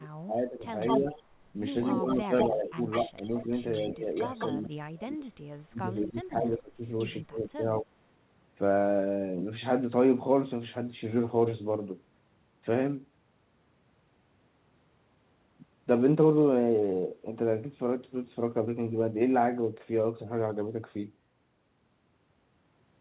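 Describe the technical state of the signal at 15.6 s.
At 15.6 s the speech is intact, with no dropout, glitch or distortion, just the narrow telephone band of the call path with nothing above 4 kHz.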